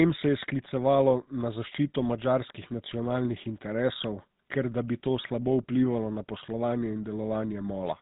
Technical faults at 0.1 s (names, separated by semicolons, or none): GSM full-rate codec